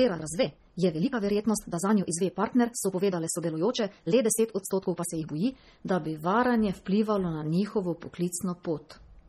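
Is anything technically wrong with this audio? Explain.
Yes. Throughout, the speech sounds watery and swirly with heavy MP3 compression artefacts and nothing above 18 kHz, likely from an MP3 encode around 32 kbps. Unlike noise, the grain shifts between frames. From 0.0 to 5.68 s a time-stretched section runs about 1.7 times too fast, likely squeezed by dropping short pieces. Pitch stays normal, so it isn't simple speed-up.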